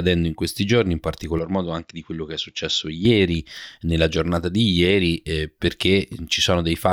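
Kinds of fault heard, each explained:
Input switched to a poorer device: From 1.39 to 3.05 s the speech turns duller and drops by roughly 5 dB, with nothing above 7.4 kHz and a faint new background hiss well below the signal. There is no gap at either change. Because the bandwidth, level and noise floor shift together and then snap back, this is likely a change of input device, not a filter or gain change alone.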